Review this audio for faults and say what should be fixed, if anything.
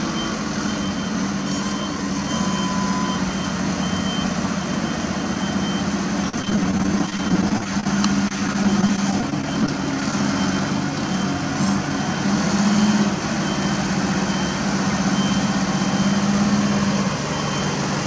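Repeated packet loss (robotic sound) at 6.29–7.86 s and 8.28–10.13 s: short gaps up to 43 ms are patched by stretching preceding sound, leaving choppy audio with pieces missing. Prevent it by improving network stability or enlarging the jitter buffer and enabling forward error correction.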